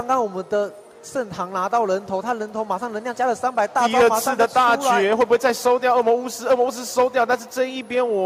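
No technical faults can be heard anywhere in this audio. Nothing breaks, drops out or changes character at any point along the way.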